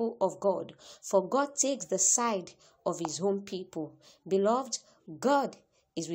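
Nothing in the audio stood out as a problem on listening.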